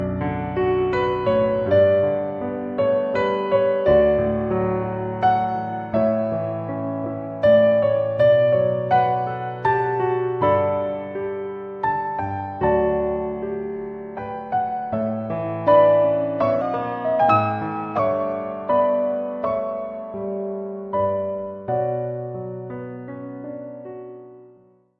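The audio has one short stretch with a wrong sample rate fault, from 16.61 to 17.99 s. In that span the sound runs about 1.09 times too fast. Its pitch rises by roughly 1.5 semitones at the same time. Speed and pitch shift together because the samples are clocked out faster than they were captured, with no conversion. The ratio fits material recorded at 22 kHz being played at 24 kHz.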